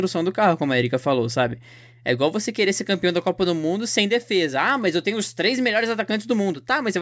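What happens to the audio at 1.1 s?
Nothing goes wrong at 1.1 s; the speech runs through that moment intact, with no dropout, click, distortion or glitch.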